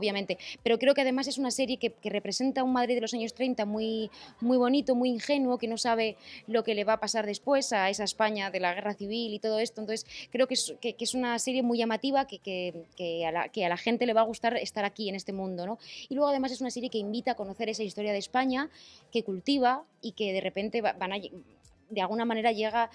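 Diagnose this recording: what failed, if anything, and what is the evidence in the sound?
Nothing failed; no fault is audible anywhere in this recording.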